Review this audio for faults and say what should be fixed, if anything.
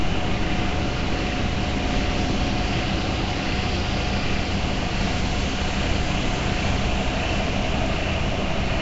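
Nellymoser compression, throughout the clip: the audio has a rough, hissy halo, a smeared, underwater character, and nothing above 7.7 kHz. This is likely Nellymoser Asao coding, which spends a fixed, small bit budget per block and fills starved bands with noise, consistent with roughly 32 kbps. To prevent it, record or export with a higher-rate modern codec or lossless format instead.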